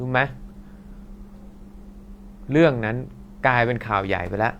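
No technical faults can be heard anywhere in the audio.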